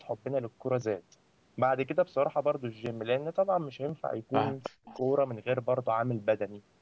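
From 4.63 to 5.01 s there's an echo leak: a repeat of the speech trails about 312 ms behind, roughly 10 dB down, likely a loudspeaker echo the far end's canceller didn't fully remove. Inside that, from 4.70 to 4.87 s, the talker gets speech suppressed in double talk. The voice dips very deeply, something like 40 dB, over about 150 ms, likely because the canceller turned the talker down along with the echo.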